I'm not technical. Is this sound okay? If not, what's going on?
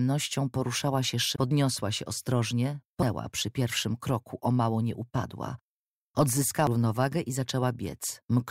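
No, not quite. There are three tiny glitches, at about 1.36, 3.02 and 6.67 seconds, each a quick chirp or blip lasting only a few thousandths of a second. That's damaged data in a compressed stream: a few bits of the squeezed-down audio file got scrambled, so the player couldn't read that scrap properly, lost its place for a moment, and had to hunt for the next good chunk before carrying on.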